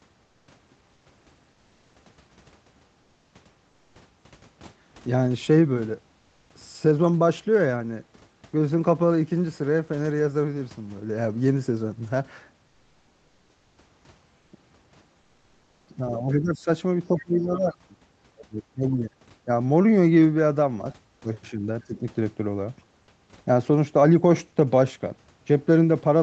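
In the pauses at 0.25–0.47, 0.93–1.05, 3.69–3.95 and 14.37–14.51 s, comfort noise replaces the background: a steady, featureless hiss about 1 to 3 dB quieter, likely from discontinuous transmission. On a spectrogram it appears as smooth, uniform patches.

From 15.97 to 21.97 s, speech is suppressed in double talk at 15.97–16.68, 17.08–18.0, 18.31–19.17, 19.45–19.49, 21.21–21.30, 21.50–21.67 and 21.87–21.97 s. The echo canceller, likely confused by simultaneous talking, ducks the voice by anywhere from a few dB to roughly 35 dB. In the waveform the envelope shows sudden notches.

At 16.33–16.39 s, inside the first ducked stretch, the other side's voice leaks through as a faint scrap about 25 dB below the speech, likely from residual loudspeaker echo. It appears as a weak, brief smear of energy.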